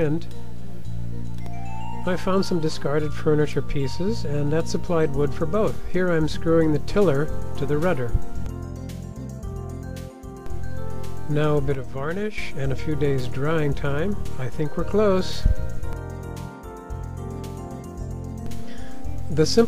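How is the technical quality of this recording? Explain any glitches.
There is one glitch, from 11.75 to 12.38 s: one channel drops out, likely a stereo channel briefly lost, so the mono sum falls abruptly by about 6 dB and is otherwise unchanged.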